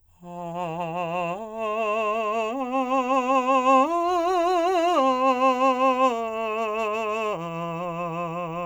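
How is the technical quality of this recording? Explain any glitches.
The music comes through with no technical glitches to point to, the signal holding steady and intact throughout.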